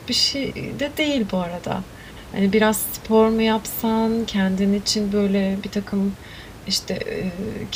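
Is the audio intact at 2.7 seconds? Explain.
Yes, the audio is intact at 2.7 seconds; the speech runs cleanly there, with only the room's own background noise audible about 18 dB beneath it, which belongs to the recording and is not a fault.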